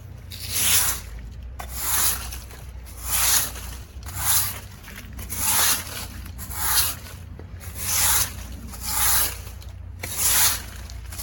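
No technical faults are audible.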